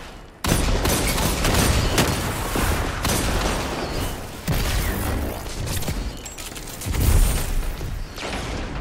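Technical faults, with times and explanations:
Nothing here stands out as a technical problem; the audio comes through steady and undisturbed the whole way.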